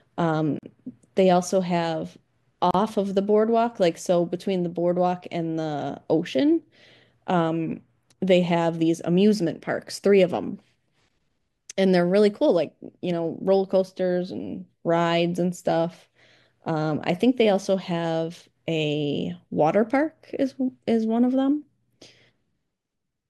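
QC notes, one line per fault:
0.59 to 0.63 s and 2.71 to 2.74 s: gap at a join of encoded pieces. Separately encoded segments were spliced without trimming each run's leading encoder delay and final-frame padding, so gaps of about 41 ms and 34 ms cut into the speech with smeared edges before it resumes mid-flow.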